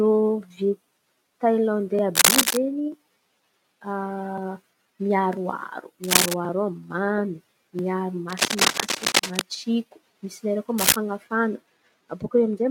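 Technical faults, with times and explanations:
2.15–2.58 s, 6.04–6.34 s, 8.28–9.41 s and 10.78–10.96 s (just after "lerany koa"), cable scratch noise: brief, dense, uneven bursts of scratchy rustling sit a little above the speech, and about level with it in the longest burst. The likely cause is a worn cable or connector being moved, its contact resistance fluctuating. The noise is a rough, continuous texture, not isolated clicks or steady hiss.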